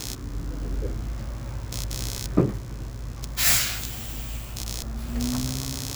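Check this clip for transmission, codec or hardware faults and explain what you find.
One hardware fault runs through the whole clip: computer activity noise. A buzzing, chirping layer sits about 10 dB below the sounds, pulsing at around 70 per second. Processor or graphics load shifts the shared ground, leaking into the audio circuit.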